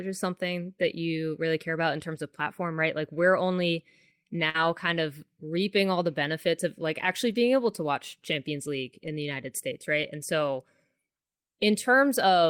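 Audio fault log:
2.15, 4.54–4.64, 7.30–7.36 and 9.06 s, lost packet rebuilt from error correction: short rough, noisier patches with no gap, after "really care about in", before "kind of reaping all", and between "benefits of like actually" and "able to watch". Lost packets were replaced by low-bitrate copies carried in the following packets.
4.49–4.56 s, burst of packet loss: about 48 ms of held, fading sound, then speech resumes with about 40 ms skipped, shortly before "kind of reaping all". Consecutive packets arrived too late or not at all, so the receiver stretched and faded the last sound.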